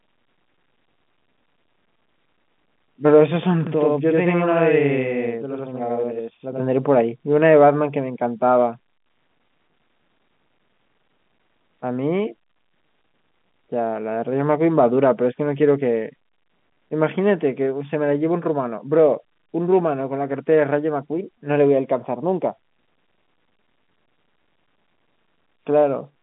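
Channel delay (doubling) affects this telephone-band speech from 3.67 to 6.60 s: one channel arrives about 85 ms late, fitting a 4096-sample buffer, so the mono sum carries a distinct slap echo.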